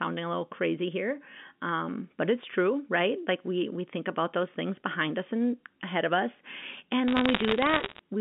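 From 7.08 to 7.99 s, bit errors on a digital phone line scatter sharp ticks and crackle over the speech. Flipped bits on the G.711 A-law line each corrupt a single sample, at a rate of under one percent, and hits on sign or high-order bits produce the loudest clicks.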